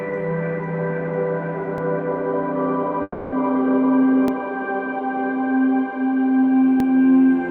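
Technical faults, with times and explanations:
1.78–1.80 s, 4.28–4.30 s and 6.80–6.82 s, overlapping chunks: a short click or stutter every 2.5 s, where about 20 ms of audio plays twice. Each processing chunk starts before the previous one ends, so the overlap repeats at every join.
3.02–3.34 s, long network dropout: the last sound stretches into a fading buzz or hiss for about 0.3 s, then a very brief silence, then the audio resumes with roughly 300 ms missing. This is likely a stall in delivery that the receiver papered over.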